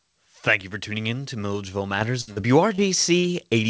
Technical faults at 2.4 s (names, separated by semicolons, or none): burst of packet loss; short concealed packet loss